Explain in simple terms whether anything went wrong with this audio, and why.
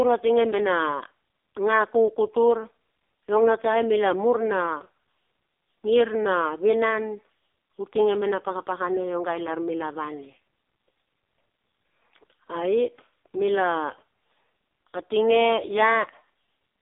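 Something did go wrong: the speech has passed through the AMR narrowband mobile codec, the squeeze used for older phone calls, and it affects the whole recording. All sound above about 3.6 kHz is gone, so the speech is dull and boxy. Because the codec was starved of data, it rebuilds each voice as a buzzy, robot-like imitation. That artificial buzz is what separates it from an ordinary muffled phone line, which loses the top but still sounds natural.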